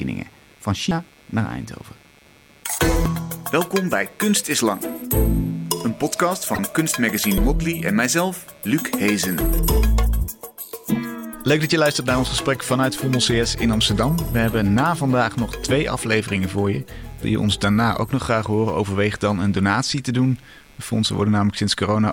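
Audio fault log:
throughout, computer activity noise: a faint buzzing chirp pulsing around 150 Hz, roughly 35 dB below the sound, as processor and graphics load shift the shared audio ground.
0.91 s, 3.06 s, 7.38 s, damaged data in a compressed stream: brief squawks or blips where corrupted frames are misread, throwing the decoder off sync until it finds the next header.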